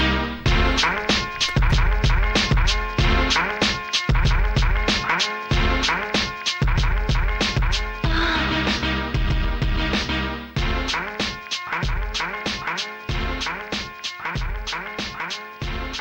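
Video or display buzz runs throughout: a video cable or screen couples in a 50 Hz field-rate buzz with hash and a faint 15.6 kHz line tone, about 40 dB down.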